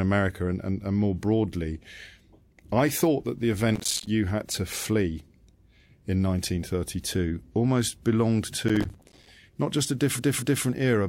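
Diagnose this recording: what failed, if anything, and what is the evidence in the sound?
Gritty bursts of crackle tear through the speech from 3.74 to 4.07 s, between "I thought that the" and "you had to flee", and again from 8.68 to 9.27 s after "almost belonged". This is processor overload crackle at the driver or buffer stage: dozens of repeated deadlines for very short buffers were missed, each miss dropping in a hard-edged sliver of silence.

From 10.15 to 10.61 s the audio stutters, with the same 232 ms stretch heard two extra times, adding 464 ms to the clip. These are repeated frames, a storage or codec fault: a run of compressed frames was written or delivered again, and the decoder faithfully replayed it.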